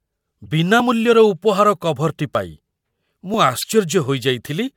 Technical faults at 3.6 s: damaged data in a compressed stream

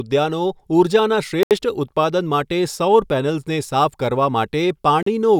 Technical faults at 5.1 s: Bluetooth stall

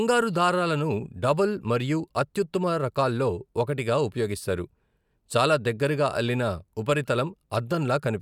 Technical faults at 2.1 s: none

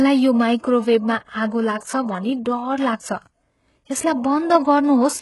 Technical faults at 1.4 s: HE-AAC compression

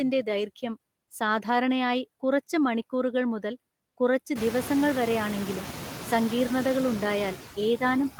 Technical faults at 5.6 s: noise suppressor artifacts

